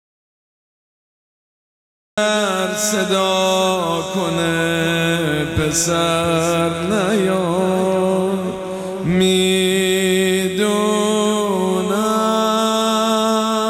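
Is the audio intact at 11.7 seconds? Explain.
Yes, the audio is intact at 11.7 seconds, with no dropout, click, distortion or other fault audible at that point.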